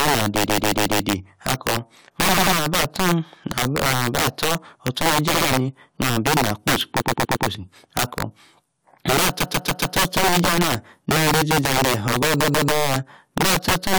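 Right from the start and all the way through, the speech has integer overflow: the level is pushed roughly 15 dB too hot, and instead of limiting, the loudest peaks (something like 7 percent of samples) wrap around to the opposite extreme. So every loud syllable cracks violently rather than just flattening out. It's a much harsher, snappier sound than ordinary clipping, and it follows the loud moments throughout the clip.

On top of that there are repeated frames, a short chunk of compressed audio getting played more than once, which gives a stutter. At 0.45 to 1.01 s a roughly 139 ms block (fits about six frames) plays four extra times. At 2.36 to 2.54 s a 93 ms block repeats twice more, and at 5.33 to 5.47 s a 70 ms block does the same. At 7.00 to 7.47 s a 116 ms block comes back four extra times, at 9.39 to 9.95 s a 139 ms block does likewise, and at 12.44 to 12.71 s a 139 ms block repeats twice more. 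Altogether that stretches the audio by about 2.2 s.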